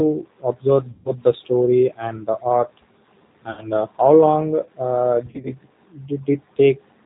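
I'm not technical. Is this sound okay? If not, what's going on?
No. The whole clip is speech carried by the G.729 codec, a phone-call compressor that rebuilds the voice from a simplified model. Everything sounds muffled and slightly rough, as if synthetic. The damage is plainly audible, though the speech stays understandable.

There is also VoIP packet loss concealed by the speech codec, three times. Pieces of the call went missing, and the decoder filled the gaps by stretching the last sound into a fading buzz or noise. This happens from 0.91 to 1.11 s, just before "the story", covering about 140 ms of lost audio. It happens again from 3.51 to 3.64 s, just before "uh how", with about 60 ms lost. The last is from 5.26 to 5.54 s, where small gaps totalling 120 ms are scattered.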